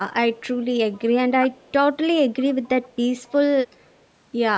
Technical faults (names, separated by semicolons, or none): echo leak